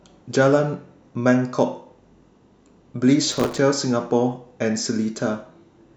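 From 3.32 to 3.58 s the speech shows processor overload crackle. The processing could not keep pace with its very short buffers, of around 3 ms, and missed dozens of deadlines again and again. Each missed buffer was filled by replaying a scrap of old audio, and the hard joins at each repeat stack into a gritty, tearing crackle laid over the speech for about a quarter of a second, stopping once the load eases.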